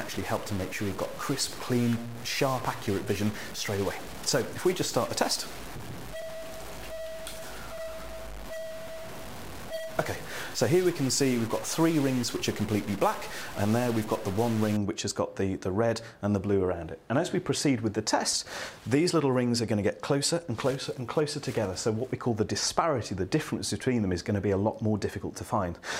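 From the start to 14.77 s the audio has harsh, buzzy distortion. Quiet gaps fill with noise instead of silence. This is a stuck bit, likely from a faulty converter or data line. About half the samples are off by a step near -35 dBFS.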